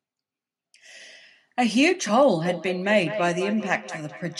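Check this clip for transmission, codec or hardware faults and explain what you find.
One fault is present: feedback echo between two devices, running from 2.45 s to the end of the speech clip at 4.40 s. A second device in the same room replays the call, and the first device's microphone picks that sound up again. Each device's echo canceller only removes its own playback, so the speech returns roughly every fifth of a second, peaking about 11 dB below the direct speech. Unlike room reverberation, which smears smoothly, these are distinct repeats at a steady interval.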